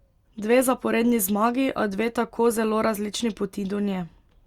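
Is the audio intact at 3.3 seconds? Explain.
Yes, at 3.3 seconds the audio is intact, with no fault present at that moment.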